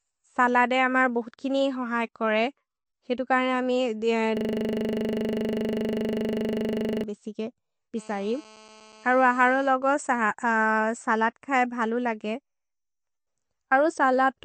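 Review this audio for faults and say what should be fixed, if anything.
Throughout the speech the sound is watery and swirly, with sibilants turning metallic and nothing above 8.4 kHz. This is likely MP3 compression at a starved bitrate, consistent with roughly 46 kbps, where the encoder cuts the treble and drops weak frequency lines frame by frame. Encode at a higher bitrate, or keep an uncompressed master.

From 4.37 to 7.04 s a steady 25 Hz buzz replaces the speech as one 40 ms fragment repeats exactly, dozens of times. This is a system hang loop: the computer stalled while the audio hardware kept replaying its 40 ms ring buffer. Fix the driver or process that froze, and monitor for buffer underruns.

From 7.97 to 9.64 s a hard, raspy buzz at 217 Hz, rich in harmonics, sits about 26 dB below the speech and doesn't follow it. This is GSM phone buzz from a nearby 2G phone on a call, whose radio bursts the audio circuit rectified. 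Keep phones away from the recording chain.

From 9.65 to 10.91 s the buzz becomes even ticks with a longer 217 Hz buzz twice a second, roughly 30 dB down. These are GSM signalling bursts from a nearby 2G phone on a call while its user was silent. The same fix applies: move the phone away or switch it to flight mode while recording.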